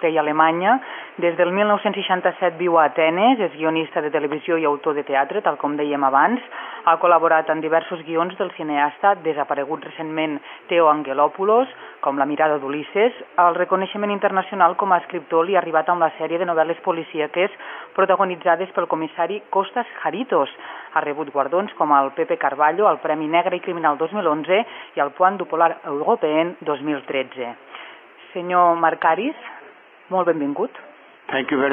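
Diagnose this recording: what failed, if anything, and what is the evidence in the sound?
At the network stage, an adaptive stream switched to a lower bitrate from 28.9 s to the end. The quality changes abruptly and codec artefacts thicken without any gap, consistent with roughly a 96 to 24 kbit/s drop.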